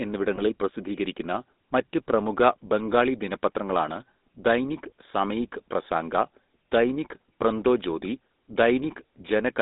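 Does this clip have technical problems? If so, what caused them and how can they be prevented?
Yes. GSM full-rate codec damage runs throughout: pulse-driven vocal-tract coding, consistent with 13 kbit/s, leaves buzzy, gravelly speech band-limited to 200 Hz–3.7 kHz. Prevent it by using a wideband codec.

Lost GSM frames at 0.36–0.41 s: a dropped frame was concealed by repeating the previous frame's settings, producing a brief metallic ring. Prevent it with stronger channel error protection.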